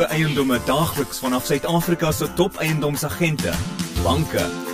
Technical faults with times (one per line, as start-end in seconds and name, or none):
0.00-4.74 channel delay (comb filtering)